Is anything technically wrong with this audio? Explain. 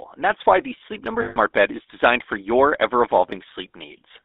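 Yes. The speech has two faults.

Throughout, the GSM full-rate codec is clearly audible. It rebuilds the voice from a vocal-tract model driven by sparse, regular pulses, which fits the 13 kbps full-rate coder. The result sounds buzzy and gravelly. The band runs only from about 250 Hz to 3.6 kHz.

From 1.22 to 1.38 s, there are lost GSM frames. For about 140 ms, which points to roughly seven missing frames, the decoder repeats the last good frame's settings. The sound freezes into a rough, metallic ring.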